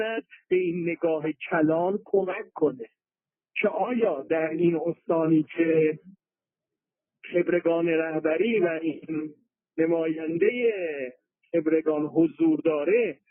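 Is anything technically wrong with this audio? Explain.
No, nothing is technically wrong with this audio.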